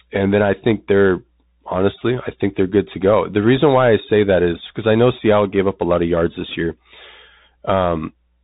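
The speech runs through a Bluetooth CVSD headset codec throughout, its one-bit slope coding plainly audible: nothing above 3.8 kHz, scratchy s sounds, and granular hiss underneath.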